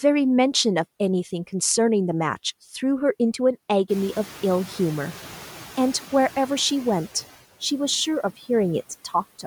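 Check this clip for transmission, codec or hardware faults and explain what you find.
One processing fault is audible: the noise suppressor catching up, from 3.89 s to 6.04 s. Around 4 s the room noise jumps by about 17 dB, to about 21 dB below the speech, and the suppressor's estimate of the noise floor is still tuned to the quieter background. It takes about 2.15 s to re-learn the new level, trimming only about 4 dB as it goes. The louder noise therefore bursts through behind the speech, then gradually sinks as the estimate settles.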